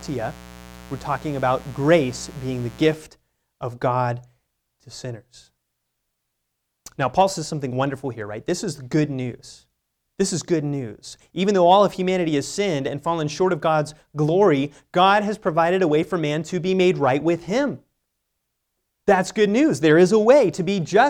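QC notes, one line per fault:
0.00–2.94 s, mains buzz: a steady, raspy buzz sits under the speech from the very start and stops just before 3 s, well down in level, somewhere around 20 dB beneath the speech. It is built on 60 Hz, with sharp spikes arriving twice per mains cycle, so its harmonics stretch up into the kilohertz range. That is the mark of switching interference from a dimmer, rectifier or unshielded cable leaking into the signal path.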